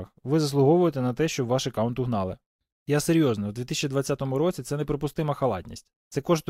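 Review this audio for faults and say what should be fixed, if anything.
Nothing stood out on listening to this speech recording, so there is nothing that needs fixing.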